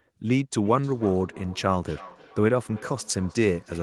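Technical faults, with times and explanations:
0.65–3.8 s, feedback echo between two devices: from 0.65 s to the end, each stretch of speech returns roughly a third of a second later, thinner and with a ringing edge, peaking at about 20 dB below the direct speech. A second device in the same room is replaying this microphone's signal, and that microphone picks it up again, which the local echo canceller cannot remove. On a spectrogram, faint, narrower-band copies of each syllable trail it at a steady spacing. On the waveform, low-level repeats follow each burst.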